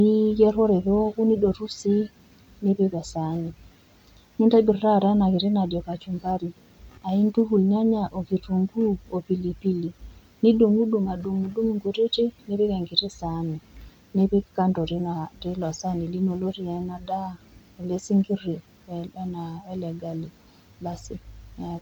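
No technical faults can be heard anywhere in the speech, and the signal holds steady throughout.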